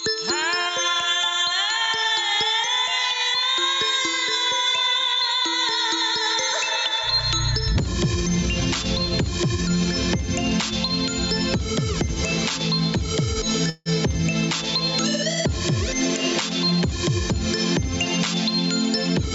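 Gain pumping runs through the whole recording: the gain swings by about 5 dB, likely from input gain set far too high against a fast limiter. On the waveform this shows as a noise floor that rises and falls between peaks. A call audio freeze from 13.69 to 13.89 s fills 162 ms with a fading continuation of the last sound and then about 10 ms of silence. Everything after it is pushed 162 ms later, likely because delayed packets emptied the jitter buffer. On a spectrogram it appears as smeared horizontal bands followed by a thin blank strip. The spectrum stops at 8 kHz, as expected from the call path.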